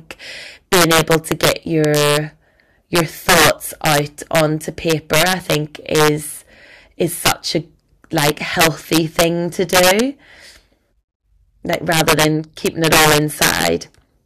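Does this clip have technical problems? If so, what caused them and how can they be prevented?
Yes: integer overflow throughout the speech, with gain about 10 dB too high. Around one or two percent of samples wrap to the opposite sign, giving violent cracks. Saturate or limit sums instead of letting them wrap.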